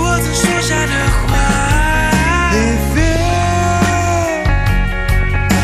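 The whole clip carries MP2 compression artefacts, likely from a low-rate MPEG Layer II encode around 80 kbps. Upper sub-bands keep dropping out and what's left is coarsely quantised, so it sounds dull with a granular, gurgling edge throughout.

On top of that there's DAB burbling at 0.42 to 1.42 s, 3.11 to 3.44 s and 5.23 to 5.42 s. Bit errors slipped past error correction, so single sub-bands jump in level frame by frame, giving bubbling, squelchy chirps. The first burst is longest and messiest.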